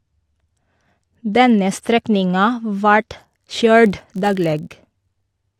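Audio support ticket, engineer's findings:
Buzz at about 47 Hz from 3.86 s to the end. Regular ticks fused into a low rasp. Rises and falls with speech level. Probable component: block-based filter stage. Filter restarted on every block. State cleared at each boundary, so each block starts from silence and opens with a small transient. Tick rate fits a 1024-sample block at 48 kHz.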